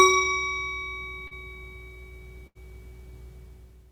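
At 1.27 to 1.34 s there is a short concealed packet loss: about 40 ms of audio never arrived, and the receiver bridged roughly 35 ms by extending the preceding sound before blending back. It is heard as a brief smear or wobble.

At 2.47 to 2.58 s a burst of packet loss removes about 80 ms. The receiver held the last sound for roughly 81 ms while turning it down, giving a fading buzz or hiss. The sound then resumes further on with a section missing, which is longer than the earlier smear.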